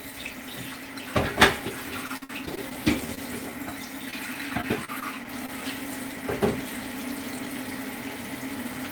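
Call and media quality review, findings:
Repeated packet loss (robotic sound), 2.07–2.73 s. Choppy texture. Six gaps in under 0.7 s, longest 54 ms. Receiver concealment repeated the last sound for 153 ms and left 140 ms missing. About a quarter of the span is patched. Network loss or late arrival.

Repeated packet loss, 4.11–5.50 s. Milder choppiness across seven gaps, none over 31 ms. 122 ms concealed, 80 ms lost. Roughly a tenth of the stretch is filled in. Same loss mechanism.

Jitter buffer slow-down, 2.35–3.51 s. Sound drags at unchanged pitch, running at 94% speed. Receiver repeated pitch periods and pause fragments to rebuild its reserve, adding 77 ms in total. Overlaps the first loss burst. Drawn-out sounds. Buffer was drained or its target delay was raised.

Short stall from a late packet, 3.15–3.19 s. A 22 ms hold on the current sound. Jitter buffer ran empty. The last sound was stretched until the packet arrived, and playback then resumed at the same point. 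Nothing is lost, but delay grows by 22 ms.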